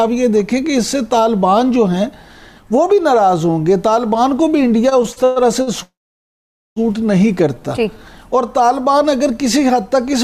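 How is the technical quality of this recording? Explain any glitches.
The recording has three network-related glitches close together, between about 4.9 and 8.0 seconds.

From 4.89 to 5.69 s there are repeated stalls (stutter). Five short gaps, the longest 118 ms, are filled by continuing the last sound. The audio drags and stutters.

From 5.83 to 6.78 s there is a call audio freeze. The sound stops for about 0.93 s, mostly silence, then resumes. Delayed packets likely emptied the jitter buffer.

From 7.55 to 7.98 s there is a jitter buffer slow-down. Repeated pitch periods or bits of pauses add 53 ms, so the audio plays at 89% speed, slightly drawn out.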